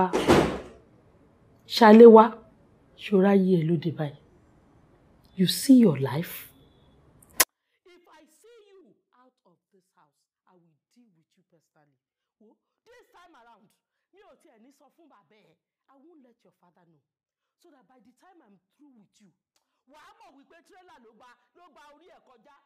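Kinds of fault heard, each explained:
24-bit alignment error (too quiet): From 7.43 s to the end, the audio drops abruptly by about 48 dB and stays there, clean but almost inaudible. The samples were stored as 24-bit values in the low bytes of a 32-bit word, yet read back as full 32-bit integers. Each value is therefore treated as 256 times smaller than intended, which is that 48 dB loss. The step at 7.43 s is instant, with no fade.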